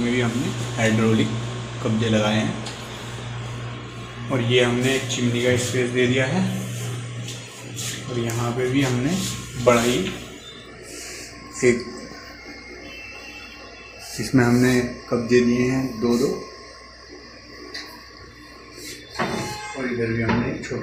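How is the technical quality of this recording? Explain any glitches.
The recording has no technical glitches. Nothing in the audio needs explaining.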